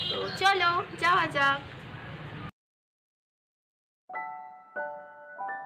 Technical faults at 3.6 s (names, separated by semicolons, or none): none